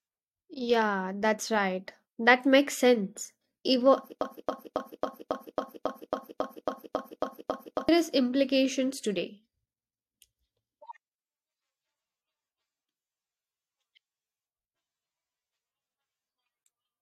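Speech with a broken-record loop from 4.21 to 7.89 s: a 0.27 s fragment repeats 13 times back to back before "implications today", likely a stalled player or stream.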